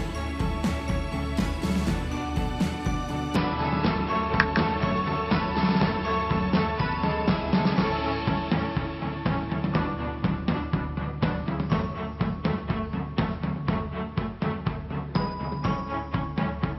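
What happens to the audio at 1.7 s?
Nothing goes wrong at 1.7 s; the audio plays through that moment cleanly, with no dropout, click or other fault.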